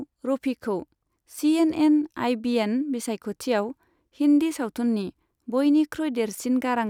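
No technical fault can be heard anywhere in the signal, with level, timing and continuity holding steady throughout.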